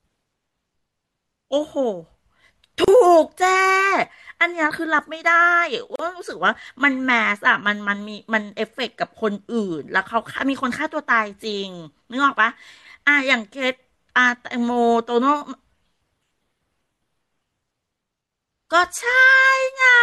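Separately encoded pieces of this speech recording were joined without trimming each encoder's start-up delay and end padding, leaving a gap at a join of encoded pieces twice: a silence of about 34 ms from 2.84 to 2.88 s and about 38 ms from 5.96 to 5.99 s. Each breaks into the continuous speech, with edges smeared by the codec, and the speech resumes exactly where it broke off.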